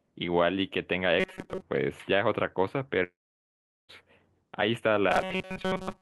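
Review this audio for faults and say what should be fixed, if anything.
From 1.20 to 1.62 s, and again from 5.10 s to the end, the speech turns into a rigid metallic buzz near 188 Hz. This is robotic sound from repeated short buffers. Audio likely arrived too seldom, so a slice of about 5.3 ms was replayed in place of most of the real signal. A larger jitter buffer would keep playback fed.

From 3.03 to 3.91 s there is a long network dropout. About 860 ms of speech is missing. The last sound briefly carries on and fades, and most of the gap, about 770 ms, is silence. Lost packets are the likely cause. Stronger loss protection, such as redundancy or forward error correction, would prevent it.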